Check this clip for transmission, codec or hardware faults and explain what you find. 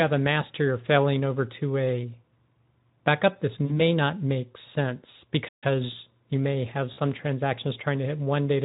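Two kinds of fault are audible: codec-concealed packet loss at two points and a single playback stall.

VoIP packet loss concealed by the speech codec occurs from 3.66 to 3.80 s, between "backup this" and "not make sense", and again from 6.93 to 6.99 s, after "you may have". Each time about 40 ms of audio went missing, which fits two lost 20 ms frames. The decoder filled the gap by extending its last pitch and spectral shape at falling gain, so the sound smears into a brief buzzy tone or coloured noise that fades, and recovers weakly. On a spectrogram the harmonics stretch out as flat horizontal lines that dim before normal structure resumes.

A playback stall runs from 5.48 to 5.64 s, right after "not make sense". The output drops to silence for about 140 ms, then continues abruptly. The likely cause is the player running out of buffered data or being briefly blocked. The waveform shows a flat, near-silent gap, and the spectrogram shows a clean vertical blank band with hard edges on both sides.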